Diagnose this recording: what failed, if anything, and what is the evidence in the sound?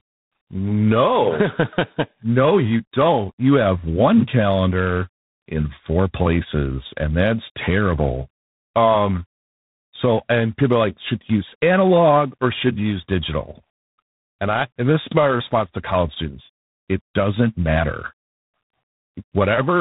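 The speech sounds rough and noisy throughout, with nothing above 3.8 kHz. This is tandem speech coding at the codec stage. The call was decoded and re-encoded at each link, so each coder degraded the last one's output. The sound fits a CVSD stage followed by G.726 at 24 kbit/s.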